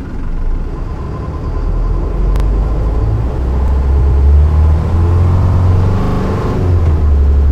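A clip of sounds with two kinds of stutter running through it. The first is a repeated buffer at 1.04, 2.36, 3.68 and 6.04 s. Playback didn't get fresh audio in time, so the device replayed the last 40 ms chunk (which fits a 40 ms buffer), with a hard join at each repeat. It plays twice at 1.04 and 3.68 s, three times at 2.36 s and five times at 6.04 s, with nothing actually dropped. The second is repeated frames at 1.18, 3.99, 5.42 and 7.20 s. A run of compressed frames got written or sent more than once, so a block of about 85 ms (at 1.18 and 7.20 s) or 107 ms (at 3.99 and 5.42 s) plays again, two, three, three and four times in total. That stretches the clip by about 85, 213, 213 and 256 ms respectively.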